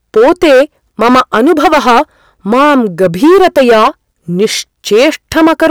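Speech, hard clipped from start to finish. The signal is driven about 14 dB past full scale. Around a sixth of the samples are cut flat, giving harsh fuzz on every loud syllable.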